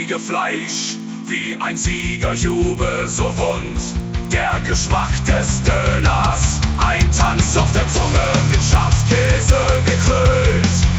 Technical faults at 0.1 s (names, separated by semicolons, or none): resampler restarted on every block